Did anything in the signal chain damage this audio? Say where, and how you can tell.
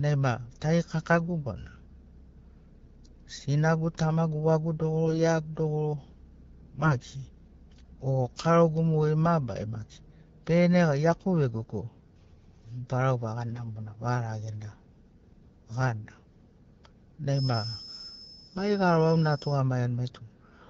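Yes. AMR bit errors in the network leg make the speech briefly hoarse and gargly at 5.04–5.20 s, 6.80–6.94 s and 18.48–18.60 s. Flipped low-priority bits scramble the codec's pulses and fine parameters.

A thin, steady 5.2 kHz tone sits about 15 dB under the speech from 17.26 to 19.63 s, swelling and fading slowly. It is likely a feedback whistle from a loudspeaker-to-microphone loop held just below runaway.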